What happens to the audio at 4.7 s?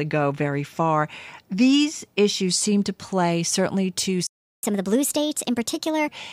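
At 4.7 s the audio is in a catch-up at higher speed, running from 4.63 s to 6.08 s. The player is draining a backlog by resampling at 1.25 times normal rate, so the speech sounds hurried and raised in pitch by about four semitones, then drops back to normal speed and pitch at 6.08 s. The backlog comes from the playback stall just before it, from 4.27 s to 4.63 s, where the output goes silent for about 0.36 s in mid-flow, likely because the player ran short of data or its thread was blocked.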